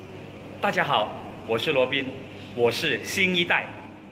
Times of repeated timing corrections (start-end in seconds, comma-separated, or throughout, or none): 0.02-3.82